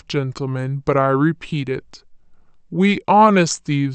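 From the first moment to the end, the speech runs slow and low, a classic wrong sample rate problem. Everything plays at about 0.73 times normal speed and sits about 5.55 semitones flat, because speed and pitch drop together when samples go out slower than they were captured. That ratio fits audio recorded at 44.1 kHz being played back at 32 kHz with no conversion, so the voice sounds heavy and dragged out.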